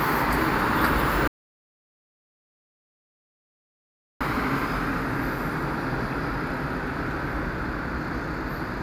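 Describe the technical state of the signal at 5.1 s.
At 5.1 s the signal is intact, with no audible fault at that moment.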